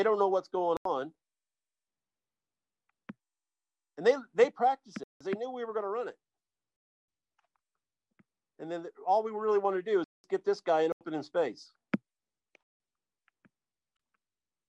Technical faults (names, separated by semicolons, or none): block of digital silence